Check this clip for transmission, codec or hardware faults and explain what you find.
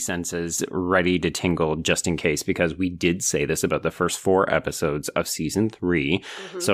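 One fault is present. At 0.58 s a sudden gain jump raises the speech and background noise together by about 6 dB until the end, likely a digital gain change applied in a single sample with no ramp. The waveform envelope steps up abruptly, and the spectrogram brightens uniformly across all frequencies at that instant.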